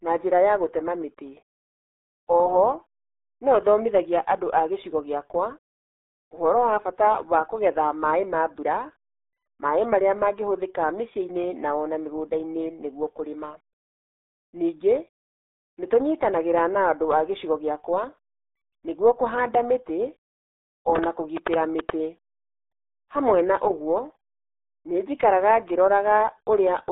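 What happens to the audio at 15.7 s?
At 15.7 s the speech sounds muffled and gargly, confined to a narrow band of about 300 Hz to 3.7 kHz with nothing above 3.8 kHz. That is the RealAudio 14.4 codec, present through the whole clip. Its heavy damage fits a low 8 kbit/s dial-up speech coder.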